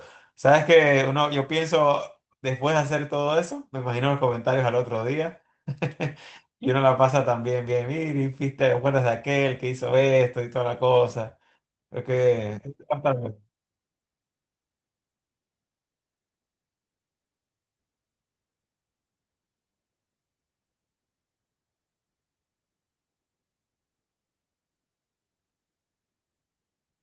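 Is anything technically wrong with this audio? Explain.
Yes. From 4.29 to 4.35 s the speech briefly turns rougher and noisier, with no gap. This is a lost packet rebuilt from error correction: about 40 ms of audio, which fits two 20 ms packets, went missing and was replaced by the low-bitrate Opus copies carried in the following packets, which the call path uses with audio up to 8 kHz.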